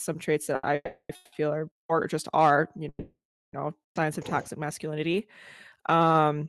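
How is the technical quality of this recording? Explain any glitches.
The recording is a speech call with several delivery glitches. All of them come from late audio rather than lost audio, and the top end stops around 12 kHz, which fits an Opus call path at roughly 64 kbps.

At 0.55 to 0.66 s there is a short stall from a late packet. A packet missed its playout time and the jitter buffer emptied, so the receiver held the last sound for about 80 ms. It is heard as a briefly stretched syllable with a slight buzz or dip, after which the speech resumes from the same point.

Call audio freezes occur at 0.75 to 1.12 s, 1.15 to 1.35 s and 2.89 to 3.56 s. They were likely caused by packets held up in transit. The receiver extended the last sound as a fading buzz or hiss for about 340, 170 and 640 ms, decaying into near silence for about 90 ms in the first freeze and about 390 ms in the last. 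The speech then picks up where it stopped, so nothing is lost, but it arrives later than it should.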